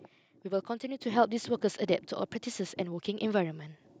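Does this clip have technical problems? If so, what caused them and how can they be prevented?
Yes. Microphone volume stepped up at 1.02 s: the whole signal, speech and the room noise beneath it, jumps about 6 dB louder in a single instant and stays there. The level rises as one step rather than a fade, so it comes from the call software's automatic gain control deciding the microphone input was too quiet and turning up the device's input volume by one fixed increment. To prevent it, turn off the application's automatic microphone adjustment and set the input level manually beforehand.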